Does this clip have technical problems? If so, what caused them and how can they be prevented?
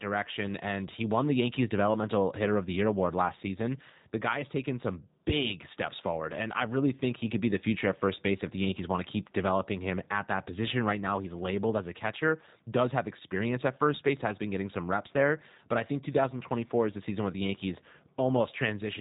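Yes. Throughout the speech, G.729 codec damage is plainly audible: nothing above 3.8 kHz survives, and the voice sounds rough and slightly synthetic. The sound points to 8 kbit/s G.729A, rebuilding speech from a filter, pitch predictor and sparse pulses. To prevent it, use a wideband codec like Opus on that link.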